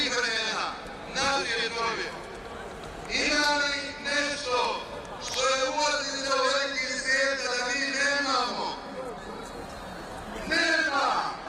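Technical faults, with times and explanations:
8.84–11.49 s, adaptive stream at a lower bitrate: the stream switched to a lower-quality encoding, likely because the connection slowed, and the drop fits a move from about 64 to 16 kbit/s Opus. The sound changes abruptly, with more codec artefacts and no gap at the change.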